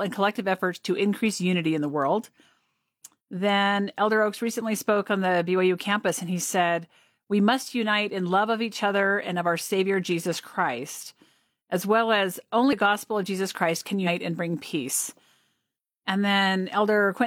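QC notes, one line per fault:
12.68–12.73 s and 14.03–14.08 s, compressed frames skipped: at each point the speech jumps forward by around 150 ms, as if a short stretch was cut out. Each jump spans about three frames, which fits a frame length of about 46 ms. The decoder found those frames missing or rejected them as damaged and resumed at the next good one.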